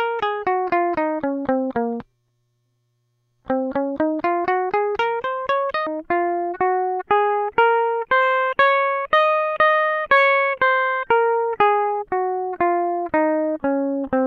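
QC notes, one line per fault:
0.0–5.87 s audio read two samples at a time (double speed): sample pairs read as single frames, so the music plays at 2x speed, an octave higher.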